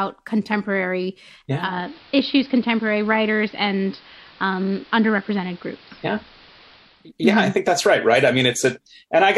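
From 1.50 s the speech goes dull and picks up a steady hiss, roughly 25 dB under the signal, and it stays that way until 7.12 s, when the full bandwidth returns. Both changes ease in over about 0.39 s and the level holds steady. This is digital radio blending to analogue: the receiver lost its digital stream and cross-faded to the station's AM broadcast, then faded back once the digital signal recovered.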